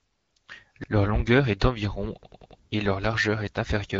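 Speech here, with two separate problems. From 0.53 to 0.60 s there's a brief hoarse, gargly scratch from AMR bit errors: the weaker-protected bits got flipped, roughly 4 percent of them across what sounds like about three frames, so pitch and level hold but the texture goes rough. Then, right after "longueur est d'environ" at 2.23 s, a repeated buffer kicks in. The same roughly 93 ms chunk, which fits a 4096-sample buffer, plays four extra times with hard joins until 2.60 s, giving an audible stutter before "et leur largeur" picks up. Underneath it all is the light AMR wideband (HD Voice) codec colouring you'd expect at around 12.65 kbit/s.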